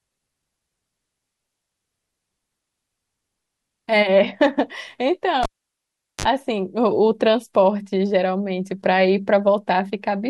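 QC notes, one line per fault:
5.43–6.26 s, cable pulled and plugged in: a pop, about 0.78 s of near silence, then a 45 ms burst of 50 Hz buzz and a second pop as the speech returns. The buzz and paired pops distinguish it from a plain dropout.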